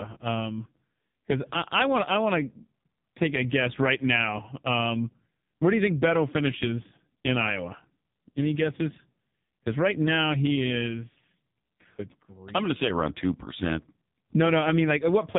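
From start to finish the speech carries heavy AMR narrowband mobile codec damage: nothing passes above 3.8 kHz, and the pulse-driven vocal-tract model leaves a buzzy, synthetic tone, which fits a low mode near 5 kbps. That artificial buzz sets it apart from simple band-limiting.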